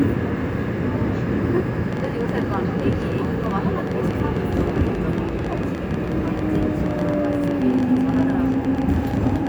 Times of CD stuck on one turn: none

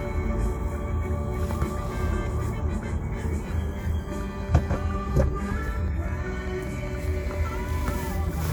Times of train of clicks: 5.28-8.49

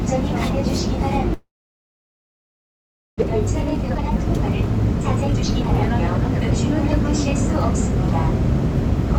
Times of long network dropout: 1.33-3.32

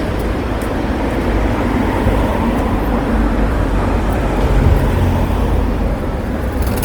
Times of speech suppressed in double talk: none

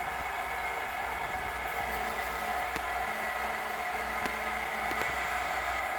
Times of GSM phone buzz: 1.88-5.02

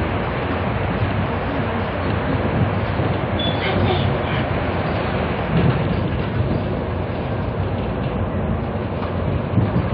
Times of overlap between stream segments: 4.35

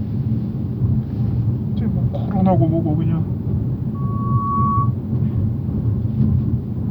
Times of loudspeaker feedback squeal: 3.94-4.94

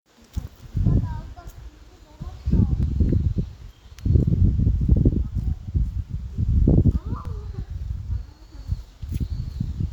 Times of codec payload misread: none

